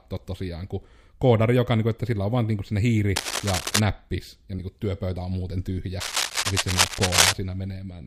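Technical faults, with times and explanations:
3.16–3.80 s and 6.00–7.35 s, cable scratch noise: dense, irregular bursts of crackle and rustle sit over the speech, first for about 0.6 s at roughly 5 dB below it, then for about 1.35 s at roughly the same level as the speech. This is likely a worn cable, connector or control being moved, so its contact resistance jumps erratically and injects a ragged noise burst into the signal path.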